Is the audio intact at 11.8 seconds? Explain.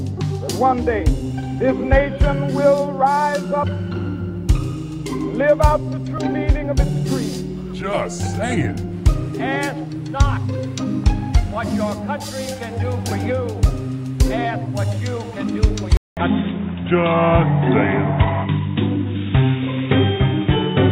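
Yes, at 11.8 seconds the audio is intact, with no dropout, click, distortion or other fault.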